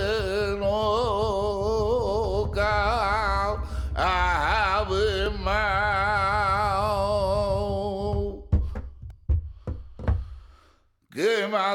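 At 5.26 s there's a tiny click, a repeated buffer: fresh audio didn't reach the device in time, so it replayed its last chunk, a sliver of about 1.33 ms, which fits a 64-sample buffer. Here it plays twice, with hard joins. At 9.10 s the same thing happens with three extra plays, so it's a brief buzzy tick rather than a clean click. In both cases essentially no audio goes missing.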